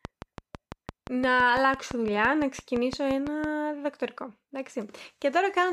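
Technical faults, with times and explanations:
0.05 to 3.45 s, train of clicks: About twenty near-identical clicks tick at a steady 5.9 per second, peaking roughly 10 dB above the speech and audible through pauses too. The likely cause is interference from nearby equipment or a faulty connection or power supply injecting repeated pulses.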